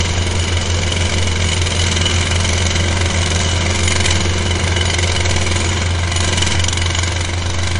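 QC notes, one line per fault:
Throughout, MP3 compression: likely a low-bitrate encode, around 40 kbps, discarding weak spectral detail; nothing above 10.5 kHz, leaving a dull, watery, swirly sound.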